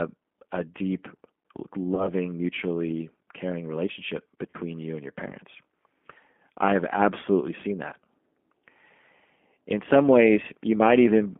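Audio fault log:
throughout, G.729 codec: rough, synthetic speech held between 200 Hz and 3.4 kHz, with plainly audible damage, which fits an 8 kbit/s codec rebuilding speech from a filter, pitch predictor and pulses.
1.95 to 2.09 s and 4.50 to 4.57 s, VoIP packet loss concealed by the speech codec: fading, stretched, distorted speech before "mutually caring relationship" and before "you and your parents". About 30 ms and 40 ms were lost, fitting three and four 10 ms frames. The decoder extrapolated the last pitch and filter at falling gain, and the speech recovered slowly afterwards.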